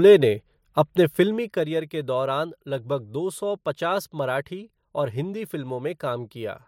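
From 1.16 to 1.68 s, the speech level drops by roughly 10 dB, but not smoothly. This is zipper noise. The gain moves in 1 dB steps, about thirty times a second, with no smoothing between them. Each jump leaves a tiny click. Together the clicks form a fine ticking texture riding on the speech while the level falls. It stops just before "के दौरान", where the gain settles.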